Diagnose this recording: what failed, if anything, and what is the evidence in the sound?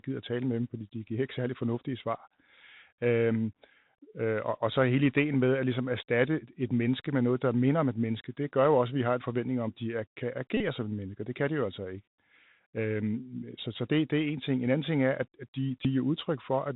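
The codec stage failed: the Bluetooth CVSD headset codec is audible throughout. Nothing passes above 4 kHz, s sounds are scratchy, loud bright passages distort, and a granular hiss sits under the speech. This points to a 64 kbps one-bit delta modulator whose adaptive step cannot keep up.

The wireless link dropped packets twice, producing a Bluetooth headset packet repeated fault at 10.57 to 10.62 s and at 15.83 to 15.87 s. Each drop is a short buzz near 267 Hz. The decoder replayed the last good 3.75 ms packet until fresh data arrived, bridging gaps of about 30 ms and 19 ms.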